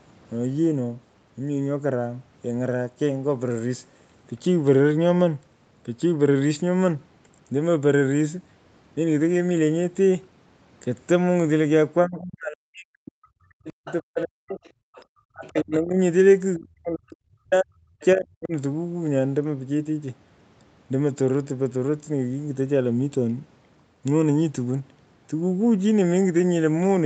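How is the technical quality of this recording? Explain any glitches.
The recording has a cluster of echo-cancellation problems between roughly 12 and 18.5 seconds of this speech clip, where both ends of the call appear to overlap. The call's microphone processing leaves nothing above 8 kHz.

Speech suppressed in double talk occurs at 12.05–14.6 s, 15.32–15.98 s and 16.56–18.53 s. The likely cause is an echo canceller that could not tell the local talker from loudspeaker echo, so it pulled everything down. The voice sinks by about 35 to 40 dB.

The other side's voice leaks through at 13.86–13.94 s, 14.64–15.05 s, 15.45–15.75 s and 18.0–18.06 s. Residual loudspeaker sound likely escaped cancellation and reached the microphone. These scraps sit about 15 to 25 dB below the main speech.

The background is gated by the echo canceller at 14.88–14.95 s. While the loudspeaker played, the canceller clamped the microphone hard. 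The room sound drops by about 40 dB for around 70 ms, then returns as the canceller releases.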